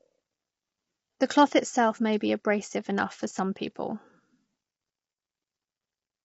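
Low-delay AAC compression runs throughout the speech, from the first moment to the last. The voice sounds rough and grainy, and the damage is plainly audible. The likely cause is AAC-ELD, the low-delay codec used for video calls. At this low bitrate it codes the spectrum too coarsely, so noise fills the gaps between the pitch harmonics. Nothing is present above 7.8 kHz, which fits a budget of around 24 kbps.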